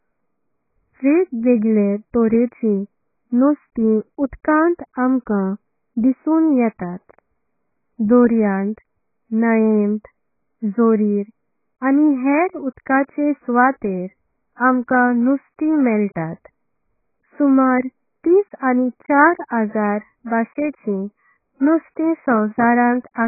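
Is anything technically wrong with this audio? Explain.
Yes, the whole clip has a heavy AAC compression problem. Nothing comes through above 2.5 kHz, so the speech sounds dull and muffled throughout, with a smeared, warbly texture. That's likely AAC-LC squeezed hard, consistent with roughly 12 kbps, where the encoder drops the top band and coarsely quantises what's left.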